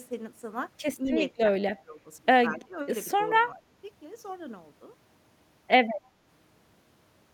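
Speech suppressed in double talk affects this speech clip at 1.0–1.15 s, 1.37–1.5 s, 1.7–2.01 s, 2.5–2.77 s and 3.47–3.63 s, where the voice briefly sinks in level. The dips range from about 5 dB to about 20 dB, deepest in the 1.7 s stretch. The likely cause is an echo canceller that met simultaneous talk from the far end, mistook this talker for loudspeaker echo, and attenuated the voice along with it.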